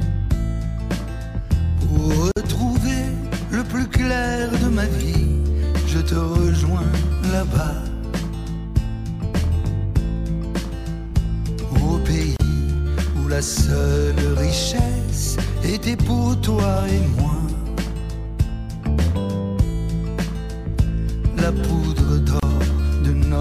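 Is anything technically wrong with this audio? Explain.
Yes, there are gaps at joins of encoded pieces, roughly every 10 s. At 2.32 s there's a 50 ms gap, and at 12.36 s and 22.40 s there are 31 ms gaps. The pieces were encoded separately and joined untrimmed, so encoder start delay and final-frame padding leave holes with smeared edges. After each one, the sound picks up where it stopped.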